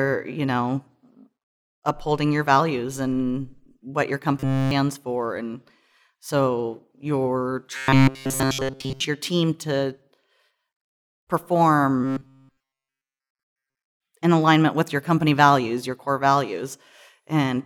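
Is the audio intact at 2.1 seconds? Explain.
Yes, the speech at 2.1 seconds plays through cleanly, with no dropout, click, distortion or other fault at that moment.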